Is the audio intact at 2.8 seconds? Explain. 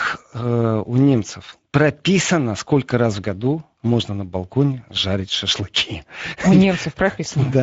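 No. At 2.8 seconds the speech carries Speex codec damage, and it runs through the whole clip rather than starting there. This CELP coder rebuilds the voice from a predicted excitation, and at a rate that fits roughly 16.8 kbps there are too few bits to model that excitation cleanly. The result is plainly audible: the voice sounds noisy and hoarse, and nothing remains above about 7.7 kHz.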